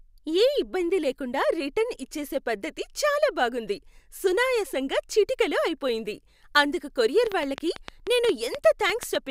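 Likely interference or a faulty connection injects a train of clicks from 7.27 to 9.16 s, after "సునాయసంగా చిటికెలో అయిపోయింది అందుకు": about fifteen irregular pops, roughly six per second, well above the speech.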